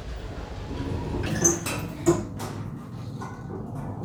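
From 1.26 s to the end at 4.04 s, a section at the wrong speed takes over: the audio suddenly runs about 1.81 times faster, and its pitch climbs by roughly ten semitones in the same instant. The likely cause is a player or edit fitting this part to the wrong clock. A pitch-shift fault would raise the tone while keeping the timing. Here every event is also squeezed and hurried, so pitch and tempo move together.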